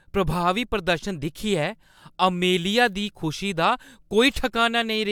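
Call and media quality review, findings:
No audible faults found.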